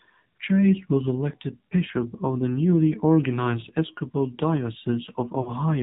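The whole clip has the AMR narrowband mobile codec sound: everything above 4 kHz is gone, and the speech is buzzy and synthetic, which fits a low rate around 7.4 kbps.

At 5.42 to 5.51 s there are lost AMR speech frames. The decoder stretches the last good sound and fades it for about 40 ms, which fits two dropped frames.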